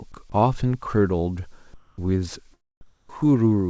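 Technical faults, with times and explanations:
0.12–0.14 s, sound dropped by the voice detector: the sender's detector likely mistook sound for background and stopped sending, so 20 ms became steady noise, losing about 10 ms.
1.74–1.98 s and 2.81–3.09 s, comfort noise in place of the background: transmission likely paused in silence, and the receiver filled the gaps with featureless synthetic noise about 2 dB and 4 dB quieter.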